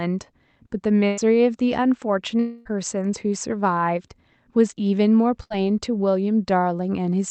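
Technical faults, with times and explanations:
1.07 to 1.20 s and 5.43 to 5.55 s, burst of packet loss: the sound is briefly stretched into a fading buzz or hiss, about 100 ms and then about 65 ms, and resumes with about 100 ms and then about 60 ms missing. The gaps are too short to die away, unlike a dropout.
2.40 to 2.68 s, long network dropout: a fill lasting about 260 ms replaces the lost sound and keeps fading without ever reaching silence, then the sound jumps ahead. This is likely a longer network outage rather than a brief burst.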